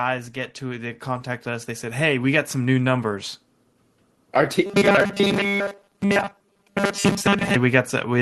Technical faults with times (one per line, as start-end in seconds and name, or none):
0.59-3.40 automatic gain rising
4.66-7.55 robotic sound from repeated short buffers